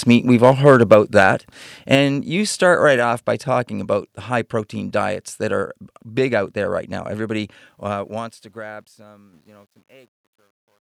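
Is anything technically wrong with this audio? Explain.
Yes. There are four distinct faults.

Microphone overload occurs at 0.10–0.14 s, 0.43–1.23 s and 1.92–1.95 s. The loudest peaks exceed the converter's ceiling by about 2 dB, about 4 dB and about 2 dB. Roughly 2 percent, 1.5 percent and 2 percent of samples in these stretches are flattened. The likely cause is a microphone input set too high. The tops of the waveform are sliced off. The result is a harsh, crackly edge on the loudest moments.

Microphone volume stepped down happens twice, at 0.94 s by about 3 dB and at 1.95 s by about 4 dB. The second is just before "you start right off". Each drop follows clipped peaks closely. That timing points to call software sensing overload and likely cutting the device's input gain in one jump. Voice and background fall together, abruptly, with no ramp.

Truncation distortion on a fade runs from 7.66 s to the end, just after "there right now everybody." The processing keeps too few bits and adds no dither. 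The grain fits roughly 10-bit precision. As the level shrinks, the waveform collapses into coarse steps. From 8.93 s to 10.85 s it sounds gritty.

Microphone volume stepped up occurs at 9.33 s, by about 6 dB. The input gain was raised in a single step. Voice and background jump louder together. Because this lands inside the fade, the level lurches upward against the downward slope.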